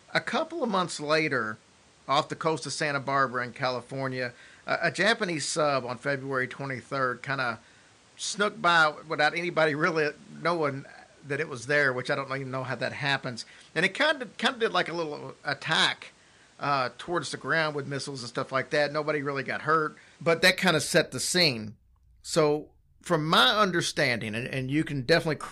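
From the start to 20.42 s the speech sounds duller, a little quieter, with added background noise, before clearing at "that kind of set", likely an input switched to a poorer device.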